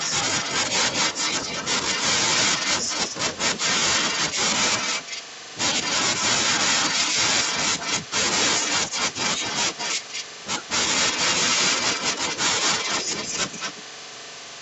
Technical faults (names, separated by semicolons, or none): echo leak